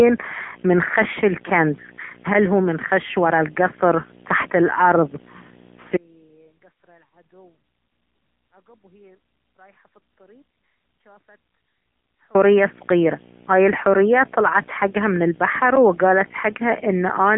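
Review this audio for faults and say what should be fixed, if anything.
A screen or video cable is coupling into the audio path for the whole clip, producing video or display buzz. Its fundamental sits at the 59.94 Hz field rate, with a harsh hash of harmonics stacked above it, and a thin, piercing whine at the 15.7 kHz line rate rides on top, all roughly 20 dB below the speech. Route audio cables away from displays and video leads, and break any shared ground with isolation.

The speech has been passed through the AMR narrowband mobile codec, and the sound points to a low mode around 7.95 kbps. Because the vocal-tract model is excited by only a few pulses per frame, the voice comes across buzzy and synthetic for all 17 seconds. The line band runs only from about 150 Hz to 3.6 kHz, with nothing above 3.8 kHz, so sibilance and air are gone. Capture or transmit over a wideband path, or use a higher bitrate.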